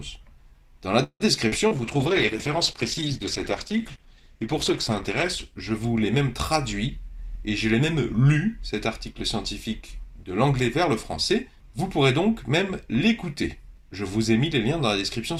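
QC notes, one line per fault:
1.03–1.23 s, call audio freeze: the last sound stretches into a buzz that fades, then about 60 ms of silence before the audio resumes where it left off, with nothing lost. The likely cause is held-up packets emptying the jitter buffer, so 166 ms of fill was inserted.
1.48–1.55 s and 1.68–1.78 s, short concealed packet loss: two brief smears where the sound wobbles and blurs. In each, about 40 ms never reached the decoder in time, and the receiver extended the preceding sound to bridge the hole before blending back into the real signal.
1.68–7.36 s, call bitrate drop: the audio turns muffled and watery, its top end dulled and the texture coarse, for about 3.1 s at its worst. The bandwidth estimate fell and the encoder went from 64 kbps to 12 kbps, coding coarsely and trimming high frequencies.
6.90–7.95 s and 11.34–12.78 s, jitter buffer speed-up: the sound runs slightly hurried at an unchanged pitch, 106% then 107% of normal speed. 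With excess audio queued, the receiver repeatedly cut pitch-period slices to shrink the delay, removing about 70 ms and about 100 ms.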